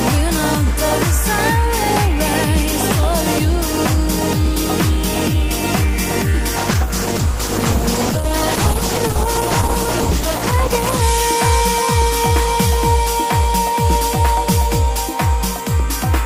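A call bitrate drop runs from 6.57 s to 11.09 s: the audio turns rough and muffled, with the top end cut away, which points to the encoder falling from around 48 to 11 kbps for about 4.5 s. On a spectrogram, the upper frequencies vanish abruptly and return at 11.09 s.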